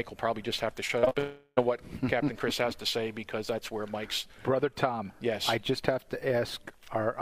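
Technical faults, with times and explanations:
0.87–1.17 s, repeated packet loss (robotic sound): five short holes, the longest 39 ms, are patched by extending the preceding sound. About 38% of this stretch is concealed rather than real audio, so it comes across choppy, with fragments missing.
1.19–1.59 s, long network dropout: roughly 380 ms of audio goes missing and is covered by a stretched, decaying continuation of the last sound, ending in about 50 ms of silence before the audio resumes. This is likely caused by an interruption in delivery across the network.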